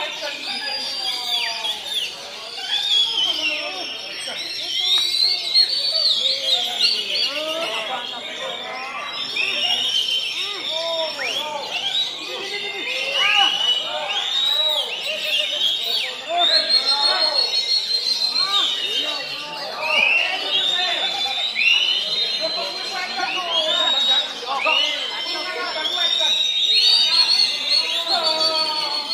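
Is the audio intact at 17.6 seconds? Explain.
Yes, the audio is intact at 17.6 seconds, with no dropout, click, distortion or other fault audible at that point.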